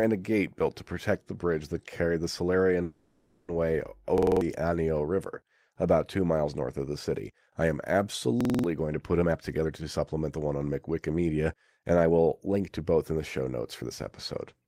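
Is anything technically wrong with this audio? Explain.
Yes. There are three kinds of fault in this speech clip.

From 2.83 to 3.50 s, just after "bridge that carried the", there is a call audio freeze. The last sound is stretched into a buzzy hiss for 650 ms. The likely cause is delayed packets draining the jitter buffer. Speech resumes where it stopped, so nothing is lost, but everything afterwards runs 650 ms late.

At 4.18 to 4.41 s, and again at 8.41 to 8.64 s just before "going to put", a system hang loop occurs. A 46 ms slice repeats five times, giving a rough 21.5 Hz buzz. That fits a 2048-sample buffer cycling while the system stalled. About a fifth of a second of speech is lost each time.

A jitter buffer speed-up runs from 9.22 to 9.69 s, between "going to put" and "to supplement the one", at 135% speed. A milder one runs from 11.55 to 13.13 s at 110%. The receiver cut short pitch-period pieces to shed excess delay, roughly 150 ms each time. 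Speech sounds hurried, but its pitch stays the same.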